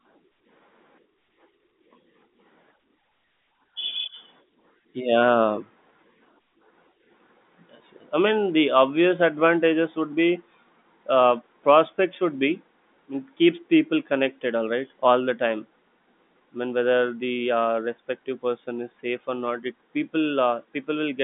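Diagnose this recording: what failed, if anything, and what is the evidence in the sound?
Nothing failed: the speech sits in a telephone band of about 150 Hz to 3.6 kHz with nothing above 3.8 kHz, which points to an ordinary G.711 A-law line path at 64 kbps working as designed, and no stage from wiring to playback shows a fault.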